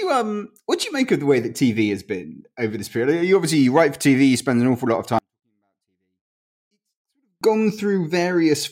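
From 5.19 to 7.41 s, after "an awful lot of", a 24-bit alignment error drops clean speech about 48 dB, near silence, unlike a dropout, which truly mutes.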